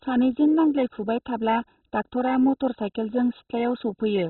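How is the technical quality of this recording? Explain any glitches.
Quality is poor throughout: the speech sounds dull and muffled, with nothing above about 4.1 kHz, and a heavy gurgling, granular distortion that never lets up. This is likely MP2 compression at a very low rate, which fits something near 16 kbps, where upper sub-bands are switched off and the remaining bands are coarsely quantised.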